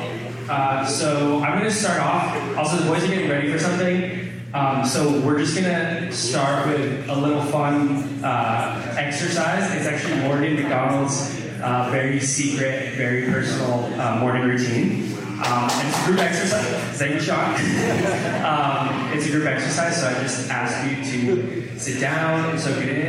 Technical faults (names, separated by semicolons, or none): none